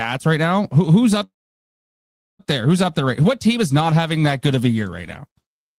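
At 1.23 s the speech stops and the last sound hangs on as a brief fading buzz, then drops to silence for about 1.09 s before the talker resumes at 2.41 s, picking up exactly where they left off. This is a call audio freeze, likely caused by packets stalling in transit and the jitter buffer running dry. Nothing was lost: the receiver inserted roughly 1.16 s of filler, pushing everything after it later by that amount.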